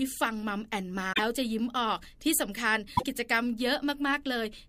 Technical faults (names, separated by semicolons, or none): broken MP3 bit reservoir